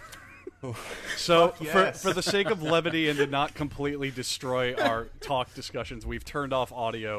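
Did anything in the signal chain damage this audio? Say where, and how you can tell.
No, nothing stood out on listening that would point to damage at any stage of the signal chain.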